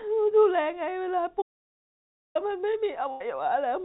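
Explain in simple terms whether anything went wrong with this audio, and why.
Two things go wrong here. First, an audio dropout to silence from 1.42 to 2.35 s: the speech cuts off dead for almost a second, with no background hiss at all, most likely because the input was briefly lost while recording carried on writing nothing.

Second, a burst of packet loss at 3.11 to 3.21 s: about 90 ms of the call went missing, so the receiver stretched the last bit of sound into a short fading buzz or hiss, then jumped ahead. The dull, phone-like tone, with nothing above 4 kHz, comes from the call codec, not a fault.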